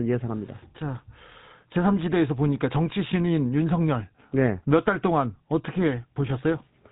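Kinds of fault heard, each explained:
GSM full-rate codec: The speech has been carried through the original GSM full-rate coder, which represents the vocal tract as a filter and drives it with a regular pulse excitation built from only every third sample. The damage is plainly audible throughout as a buzzy, gravelly roughness on the speech, and nothing passes above 3.8 kHz, leaving a narrow telephone band. The coarseness fits a 13 kbps full-rate stream.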